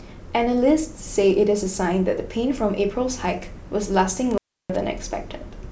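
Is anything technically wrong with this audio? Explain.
Yes, there's one problem. Between about 4.31 and 4.76 s the speech hits an intermittent contact fault: a loose cable or plug briefly loses its connection, so the signal drops out for roughly 318 ms inside that window. You'll hear crackle as the contact scrapes open and again when it closes, and in between the speech vanishes, leaving just a faint hiss until the connection comes back.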